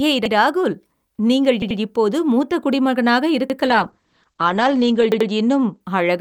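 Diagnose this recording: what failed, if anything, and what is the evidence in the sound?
Repeated buffer, at the driver or buffer stage. The same short slice of speech plays again with a hard join at 0.26–0.34 s (just before "ராகுல் நீங்கள் இப்போது மூத்த"), 1.62–1.79 s (between "ஏய் ராகுல் நீங்கள்" and "இப்போது மூத்த"), 3.50–3.58 s and 5.12–5.29 s. Each repeated piece lasts about 85 ms, which fits a 4096-sample buffer, played twice or three times. Unlike a dropout, there is no silent gap: audio is duplicated, not lost, so it stutters rather than cuts.

Call bitrate drop, at the codec stage, driven by the call's bandwidth estimate. From 3.70 to 5.87 s the encoder falls from 64 to 11 kbps and stays at the bottom for about 1.4 s. The audible bandwidth shrinks from 20 kHz to 8 kHz, so the speech turns muffled, and the coarser coding adds a rough, watery texture. A plain low-pass filter would dull the top without that grainy quality, and it would not recover once the bitrate climbs back.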